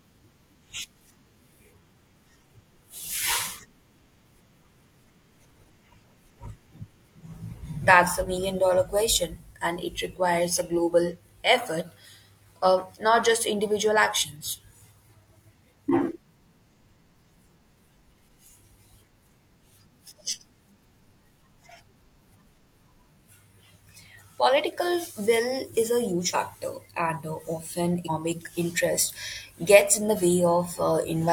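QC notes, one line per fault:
6.00–6.03 s, 7.49–7.54 s, 26.30–26.35 s (after "is a huge") and 28.05–28.10 s (after "and uh often"): compressed frames skipped. Damaged or missing frames of about 42.7 ms were dropped, so the speech jumps ahead by roughly 40 to 200 ms.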